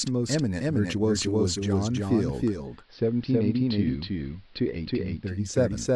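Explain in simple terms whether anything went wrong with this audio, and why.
Two things went wrong here. The first is a doubled audio track running the whole way through. A second copy of the speech, about as loud as the first, trails roughly a third of a second behind. It's likely from the sound being captured twice, once through a slower path, so everything has a flat, clean echo with no room to it.

The second is digital radio blending to analogue. At about 2.42 s the receiver lost its digital signal and faded over to the AM broadcast of the same station in just under half a second. From there until about 5.62 s a faint hiss sits underneath. The loudness stays the same.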